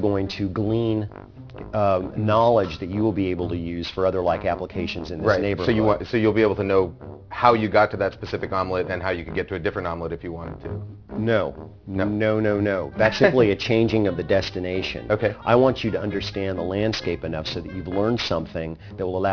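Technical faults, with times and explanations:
Throughout, aliasing: energy above 5.5 kHz folds back as gritty, metallic false tones, which fits a drop to 11 kHz done without anti-alias filtering.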